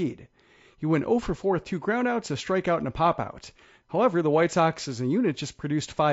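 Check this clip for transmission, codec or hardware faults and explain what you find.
One codec fault runs through the whole speech clip. The voice sounds rough and grainy throughout, with noise filling the gaps between harmonics. This is likely low-delay AAC compression, AAC-ELD, at a rate that fits about 32 kbps. Its short frames resolve pitch harmonics poorly, so the damage is plainly audible.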